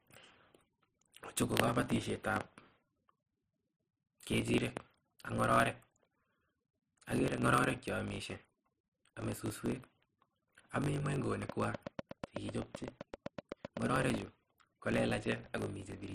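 From the start and all the way through there's a block size mismatch (truncated): one stage writes longer blocks than the next reads, fitting 1024-sample blocks with the tail of each dropped. That gives a 50 Hz buzz, and the speech runs about 1.07 times fast.

Then from 11.49 to 14.15 s a train of clicks sits on top, around twenty regular ticks at roughly 7.4 per second, standing about 10 dB above the speech. The likely cause is interference from nearby gear, or a faulty connection or power supply.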